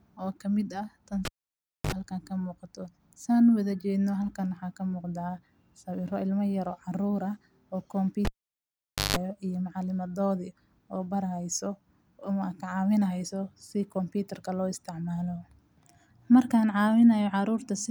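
Cable pulled and plugged in at 1.25–1.92 s, after "ka mid ah tan", and 8.25–9.17 s, after "yaroo carruur ah oo": a live lead is yanked, popping into 0.62 s and 0.87 s of near silence, then 50 Hz mains buzz (54 ms, 164 ms) while only the tip touches, and a pop as sound returns.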